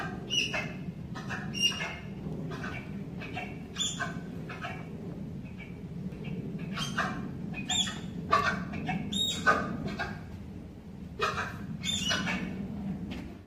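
Two brief skips, at 0.63 s and 6.12 s, each come as a small forward jump in the audio, as if about 10 ms had been cut out and the edges spliced together. The likely cause is a dropped buffer (overrun), where the recording side failed to collect a block of samples before the hardware overwrote it. What sets this apart from an underrun or dropout is that no gap of silence or repeated sound fills the hole; the audio simply skips ahead.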